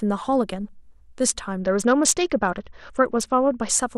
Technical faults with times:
1.60-3.71 Bluetooth SBC bit pool drop

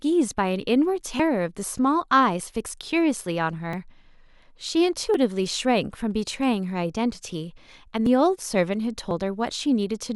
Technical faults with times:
1.19 dropped buffer (overrun)
3.73 dropped buffer (overrun)
5.14 dropped buffer (overrun)
8.06 dropped buffer (overrun)
9.11 dropped buffer (overrun)

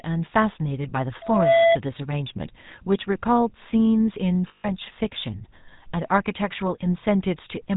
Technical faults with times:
0.00-7.76 GSM full-rate codec
1.21-1.78 loudspeaker feedback squeal
4.48-4.70 lost GSM frames

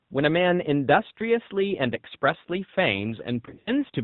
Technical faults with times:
0.00-4.04 AMR narrowband mobile codec
3.46-3.75 lost AMR speech frames

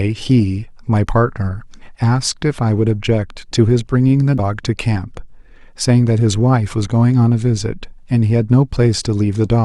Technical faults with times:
4.35-4.40 damaged data in a compressed stream

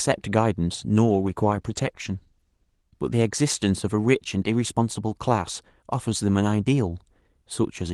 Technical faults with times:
1.06-3.59 call bitrate drop

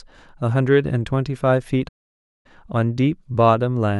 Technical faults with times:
1.88-2.46 playback stall

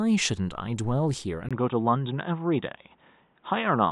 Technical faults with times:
1.49-3.92 input switched to a poorer device

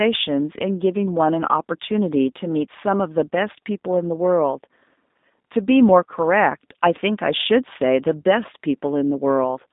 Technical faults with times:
0.00-9.72 G.729 codec

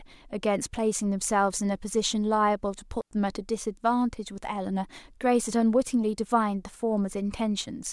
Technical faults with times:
3.01-3.11 digital wireless dropout

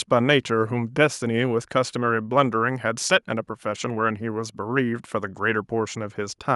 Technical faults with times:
none

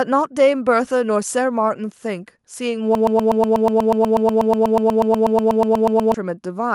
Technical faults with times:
2.95-6.14 broken-record loop

